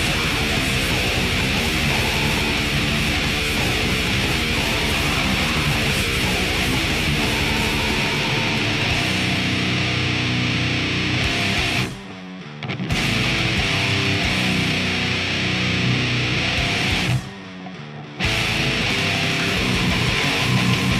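No dropouts, clicks, distortion, pitch or timing errors, or level jumps can be heard anywhere in the audio.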